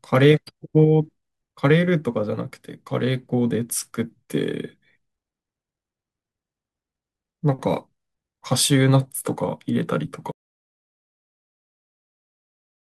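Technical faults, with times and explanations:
10.32 s to end: audio dropout to silence. Speech cuts off mid-flow into silence with no room tone, unlike a fade or gate; likely lost input.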